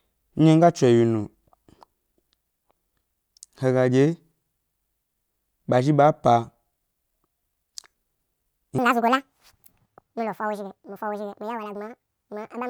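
From 8.78 s to the end at 12.69 s, the audio is read two samples at a time, at double speed: the reader treats each pair of samples as a single frame, as if the stream had two channels or samples twice as wide. Every stretch of speech therefore plays back twice as fast and a full octave, 12 semitones, higher.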